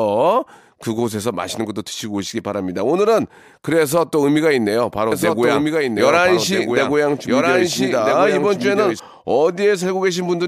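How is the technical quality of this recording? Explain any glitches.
From 5.12 to 9.00 s, a doubled audio track: a second copy of the speech, about 5 dB quieter, trails roughly one and a half seconds behind, starting and stopping abruptly, likely from audio captured twice through a slower path.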